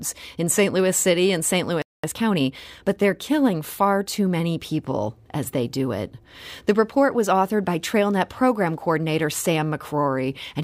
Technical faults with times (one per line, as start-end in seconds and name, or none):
1.82-2.04 playback stall
2.04-2.90 time-compressed catch-up